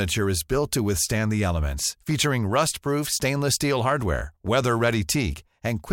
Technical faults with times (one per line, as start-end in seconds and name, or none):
none